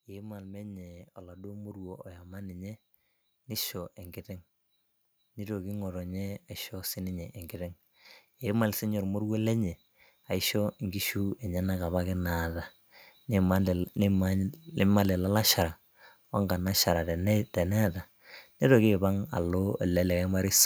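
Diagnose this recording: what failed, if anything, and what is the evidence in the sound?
Automatic gain rising from 0.05 to 2.82 s and 8.42 to 12.51 s: call-processing gain control boosts level about 7 dB gradually, swelling speech and background together.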